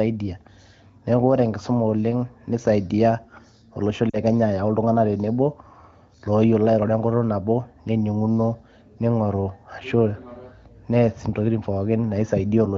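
Speech coded with AMR wideband (HD Voice), with light codec damage, has lost AMR speech frames from 4.09 to 4.17 s, just before "kenya ayau". For 40 ms, which fits two consecutive 20 ms frames failing their checksum, the decoder repeats its last good pitch and vocal tract settings at falling gain, so the sound fades to near silence within the two frames rather than cutting to hard silence or clicking as a raw dropout would. The voice then returns weak for a moment.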